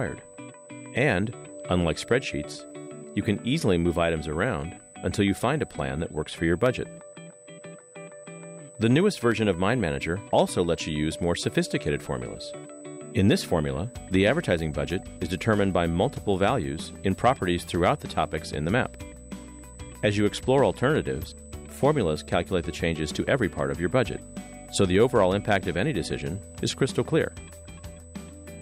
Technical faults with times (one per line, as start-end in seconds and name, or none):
0.00-28.61 USB whine
6.66 dropped samples
9.32 dropped samples